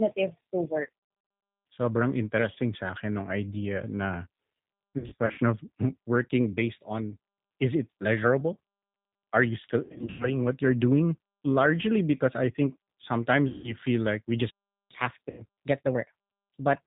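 Speech carried throughout by the G.729 codec (the G.729A variant at 8 kbit/s), with nothing above 4 kHz and a rough, slightly synthetic grain. The damage is plainly audible. The codec rebuilds each 10 ms frame from a vocal tract filter, a pitch predictor and a few pulses, so every part of the clip shares the same dull band limit and buzz. That steady, even coarseness is what separates it from the brief, localised events. VoIP packet loss concealed by the speech codec occurs at 0.83 to 0.89 s, 4.98 to 5.40 s, 9.84 to 10.36 s, 13.48 to 13.75 s and 15.30 to 15.42 s. In each stretch the decoder extends the last pitch and filter into a buzzy tone or coloured noise that fades, and the voice stays thin for a moment after the stream returns. About 280 ms of audio is lost in the first stretch, in runs of up to 60 ms, and about 240 ms in each of the second and third, with one gap of 100 ms in the third. 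Unlike a dropout, the gaps are filled with smeared, droning sound, not silence. From 14.50 to 14.91 s there is a playback stall. The sound stops dead for about 0.4 s, true silence with no buzz or tail, most likely because the player ran out of data. From 14.91 to 16.83 s comes catch-up at higher speed. The backlog is played at 1.15 times normal speed, so delivery hurries and pitch rises by about two semitones. That is a pitch and tempo shift across a sustained stretch, unlike the momentary roughness of concealment, which also occurs once within this stretch.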